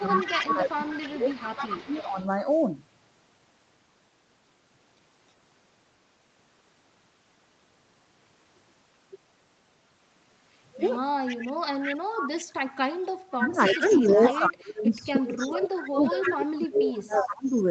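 From 0.0 to 2.18 s the speech dips and thins, at its deepest about 15 dB down. This is speech suppressed in double talk. The likely cause is that both sides were talking at once, and the echo canceller, unable to tell the local talker from loudspeaker echo, turned everything down. It returns much harder from 13.31 to 17.55 s, where the voice sinks by as much as about 30 dB and breaks up across those four seconds.

Over the same opening stretch, from 0.0 to 2.25 s, a second copy of the voice trails the first by 314 ms, about 10 dB below it. This is echo leak, likely from a far end on speakerphone whose echo canceller let some of the loudspeaker pickup through, so it was sent back. The delayed copy recurs at 10.79 to 12.72 s (about 15 dB down), 13.33 to 14.39 s (about 10 dB down) and 15.22 to 17.56 s (about 15 dB down), always 314 ms behind the voice.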